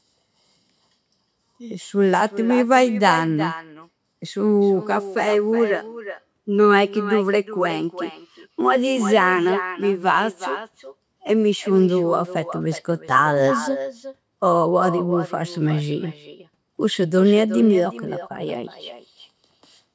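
From start to finish the speech carries an echo with no canceller: the far end is playing the call over a loudspeaker, its microphone picks that up, and nothing strips it out, so every phrase returns around 0.4 seconds later, about 12 dB quieter and thin, with the call's bandwidth topping out at 8 kHz. Unlike room reverberation, which blurs into a smooth decaying tail, this is a distinct delayed repeat that trails each phrase.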